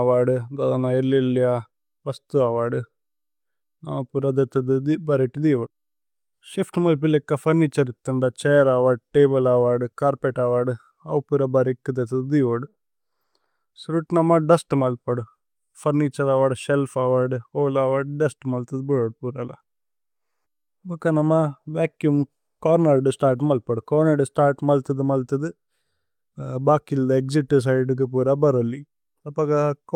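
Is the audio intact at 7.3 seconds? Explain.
Yes, the audio is intact at 7.3 seconds, with no dropout, click, distortion or other fault at that moment.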